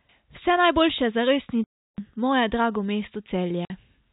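At 1.64 s the speech cuts out for 340 ms, and at 3.65 s for 50 ms. This is packet loss filled with silence, with the receiver playing nothing for missing packets of what sounds like 10 ms each. Each gap appears as a flat waveform and a blank spectrogram column, with hard edges.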